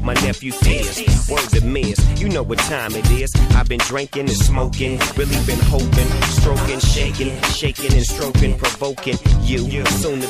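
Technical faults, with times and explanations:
No technical faults can be heard in this clip.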